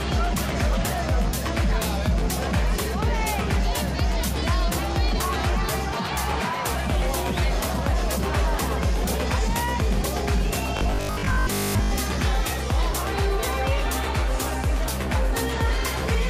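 From 10.77 to 11.91 s, the sound turns into a rigid, metallic drone: robotic sound from repeated short buffers. A steady 50 Hz buzz follows the original only roughly. This likely comes from new audio arriving too seldom, so a 20 ms stretch is replayed over and over, covering most of that span.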